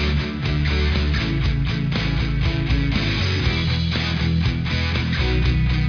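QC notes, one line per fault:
No technical faults were detected anywhere in the recording.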